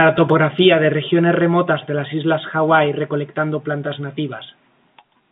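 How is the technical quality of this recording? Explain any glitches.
No glitches or technical faults are audible here.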